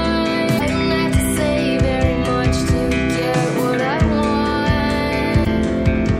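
At 0.56 to 0.61 s there is a short glitch. It lasts about 40 ms. A second one follows at 5.42 to 5.47 s, a little over 40 ms long. Both come from damaged data in a compressed stream. Some bytes of the encoded audio were corrupted. The decoder misread those frames and lost sync. It then hunted for the next valid frame header. The bad frames come out as a brief chirp, squawk, click or short hole that breaks into the sound.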